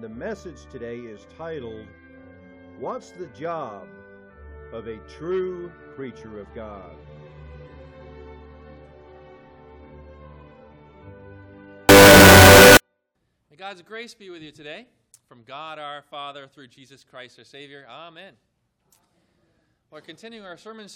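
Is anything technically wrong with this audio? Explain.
Yes. From 11.89 to 12.77 s the sound turns into very loud, harsh distortion, with quiet moments as loud as the rest. This is likely signed and unsigned mixed up in 16-bit samples. Flipping the top bit turns every zero crossing into a full-range jump.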